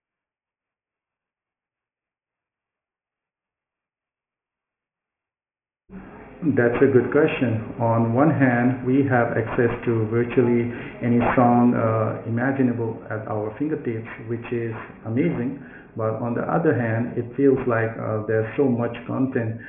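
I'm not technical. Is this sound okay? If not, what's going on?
No, there's aliasing the whole way through: the speech was squeezed to a very low sample rate without filtering first, so sounds above about 3 kHz fold back as gritty, metallic, fairly noticeable false tones.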